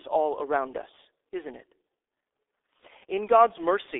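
Speech, and it's been through G.723.1 coding for the whole clip, so it sounds muffled and hoarse. Nothing comes through above 3.7 kHz, and the usable band sits around 300 Hz to 3.6 kHz, like an old phone line. The damage is heavy, with consonants smeared because the codec only refreshes its voice model every 30 ms frame. That graininess fits a very low rate, around 6 kbit/s.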